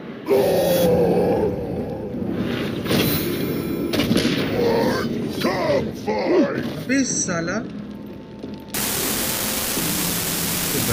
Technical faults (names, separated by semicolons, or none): unreliable data bit